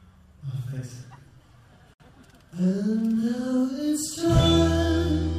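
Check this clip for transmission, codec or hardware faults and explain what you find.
There is one fault, a gap at a join of encoded pieces. From 1.94 to 2.00 s, a silence of about 63 ms cuts into continuous sound. Separately encoded pieces were joined untrimmed, leaving encoder start delay and last-frame padding in. Smeared edges bracket the silence, then the sound resumes where it stopped.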